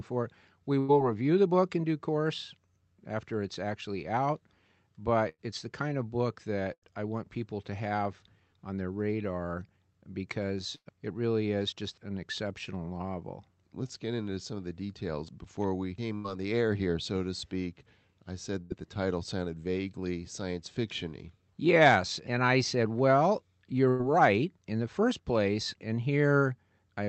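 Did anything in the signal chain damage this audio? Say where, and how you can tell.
Yes, there are two faults, both in the network and jitter-buffer stage of a call.

A burst of packet loss occurs at 0.79 to 0.93 s (just before "review the"), 5.29 to 5.41 s, 6.73 to 6.94 s, 10.75 to 10.88 s, 16.15 to 16.27 s (after "the details before we"), 18.61 to 18.73 s and 23.89 to 24.02 s (after "and I said well"). Each time, the last sound is held for roughly 90 to 100 ms as a fading buzz or hiss, and then about 60 ms of speech is simply gone. At 10.75 s the concealment runs out into about 50 ms of silence. A held, decaying tail followed by a jump distinguishes concealment from a plain dropout or a click.

Jitter buffer speed-up follows several of these gaps: 1.46 to 1.78 s at 111% speed, 5.42 to 11.83 s and 16.27 to 18.85 s at 102%, and 24.03 to 24.43 s at 108%. The buffer built up after late packets, and the receiver shed short pitch-period slices, roughly 40 to 100 ms in total per episode, to recover. 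The 111% and 108% stretches sound hurried but the pitch stays put, which rules out a resampling or clock-rate error.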